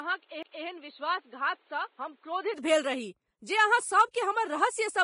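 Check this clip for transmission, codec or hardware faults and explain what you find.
Four faults are audible in this speech clip: codec damage over the whole recording, a stretch from a poorer input device, a CD skip and one pre-echo.

Vorbis compression is likely present throughout, and the damage is heavy. Nothing survives above 10.6 kHz, and the treble that remains is coarsely quantised, so fine detail turns into noise of similar energy. The result is hissy and grainy, with roughened tones and blurred onsets. The amount of damage fits a bitrate around 25 kbps. On a spectrogram this shows as a hard ceiling at 10.6 kHz with speckled, patchy energy below it.

From the start to 2.54 s the input is likely switched to a poorer device, either a different microphone or a headset's call profile. That device passes nothing above 4.4 kHz, so the sound is dull and boxy. It also adds its own background noise around 35 dB below the speech, and the level sits about 5 dB lower. 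At 2.54 s the sound clears up with no silence at the change. A spectrogram shows the band ceiling rising abruptly there, and a waveform shows a small step in level.

At 0.43 s there is a CD skip. A knock or a disc flaw made the laser jump to another turn of the spiral, so the player muted for a few milliseconds and then resumed from a different point. It is heard as a tick and a sudden discontinuity in the sound. On a waveform this appears as a tiny gap followed by a mismatched join. On a spectrogram it is a thin vertical break.

At 4.11 s there is a pre-echo spreading over 33 ms before an attack. A sharp onset fell late in a transform block, and the quantisation noise sized for the loud part filled the quiet moment just before it. A brief hiss comes ahead of the attack, which sounds soft and smeared. On a spectrogram this looks like a faint broadband smear leading into the onset, and on a waveform like low noise just before the sharp rise.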